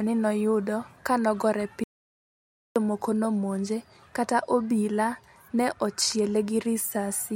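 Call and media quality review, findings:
Audio dropout to silence, 1.84 to 2.76 s, after "ni noyudo kanogore": 0.92 s of dead silence, no room tone. Likely input link lost, encoder kept writing silence. Resumes at "nomonje kata obila ne".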